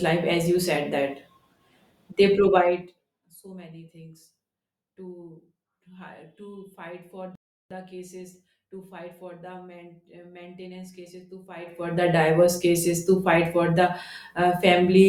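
At 7.35 s the speech cuts to silence in a rebuffering stall. The player has run out of downloaded audio and waits for more. Playback resumes at 7.71 s exactly where it stopped. Nothing is skipped, but about 0.35 s of dead air is added.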